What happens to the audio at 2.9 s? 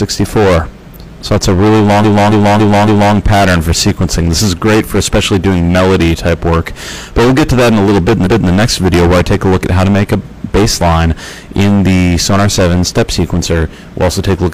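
At 2.9 s the audio is inside a burst of repeated frames running from 2.00 to 3.12 s. One block of about 278.6 ms is played four extra times, so the same fragment loops as a rhythmic stutter roughly every 0.28 s. About 1.11 s is added to the running time. On a spectrogram this shows as identical patterns tiled side by side. A waveform shows the same shape copied repeatedly.

Hard clipping is also present here, as it is throughout the clip. The signal is driven about 21 dB past what the stage can pass, so roughly a fifth of the samples are cut flat at the ceiling. The squared-off peaks add harmonics high up the spectrum, heard as a harsh fuzz on every loud moment, including each repeat of the stuttered block. A waveform shows flat-topped plateaus. A spectrogram shows energy smeared up into the high frequencies.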